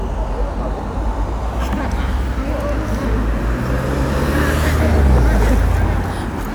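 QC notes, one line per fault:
Nothing stood out on listening to this recording of sounds.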